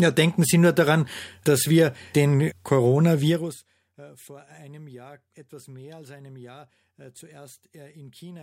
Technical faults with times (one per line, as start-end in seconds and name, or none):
3.27-3.65 zipper noise